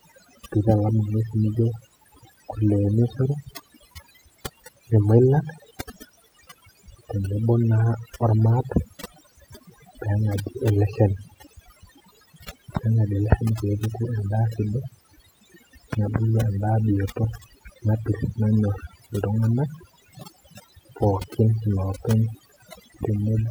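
Throughout the speech, overdone noise removal is at work: a noise reducer set far too strong pulls individual frequency bands down or out whenever they sit close to its noise estimate, taking the quieter parts of the voice with them. The background drops away and breaks up into twinkling, warbling specks.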